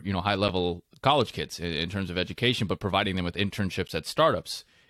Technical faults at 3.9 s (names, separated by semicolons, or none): block of digital silence